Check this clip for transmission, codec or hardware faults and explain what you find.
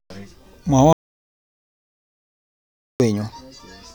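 One fault stands out: an audio dropout to silence from 0.93 s to 3.0 s. The input was likely lost while recording continued writing silence, so the speech cuts off abruptly and about 2.07 s passes in dead silence, with no room tone, before it returns.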